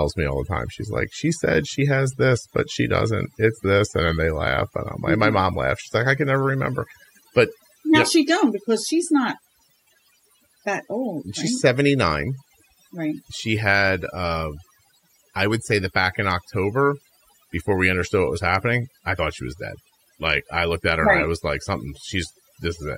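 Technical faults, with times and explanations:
Throughout: overdone noise removal. A noise reduction stage set far too aggressively is gating individual frequency bands whenever their level sits close to its noise estimate, so the background noise is pushed far down but the softer parts of the speech are cut along with it. Pauses fall to near silence dotted with twinkling specks. On a spectrogram the background shows as dark voids scattered with isolated bright flecks, and the speech harmonics appear ragged and broken up in their weaker regions. On the waveform the gaps between phrases sit almost flat.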